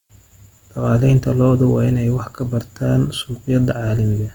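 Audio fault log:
Throughout, Opus compression: the speech keeps its full bandwidth, with content reaching about 20.2 kHz, yet it plainly sounds rough and grainy, with a noisy texture laid over tonal parts. This is likely a low-rate Opus encode in its music (CELT) mode, which fits roughly 24 kbps. Short of bits, it fills bands with noise or folded copies rather than leaving gaps, so there is graininess instead of the swirling, hollow holes of MP3.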